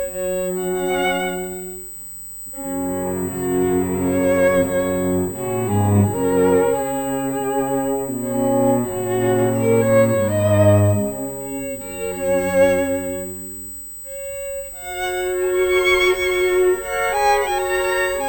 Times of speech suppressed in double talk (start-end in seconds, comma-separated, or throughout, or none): none